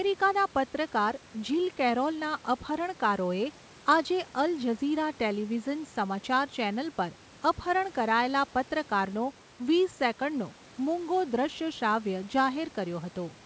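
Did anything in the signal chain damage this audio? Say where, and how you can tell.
No, nothing damaged it.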